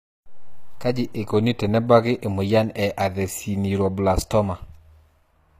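Throughout, the speech likely passed through HE-AAC compression at a low bitrate around 24 kbps. The treble is rebuilt from copied lower bands, and nothing sits above 14.9 kHz. The result is plainly audible damage, with s sounds turning gritty, metallic or lispy.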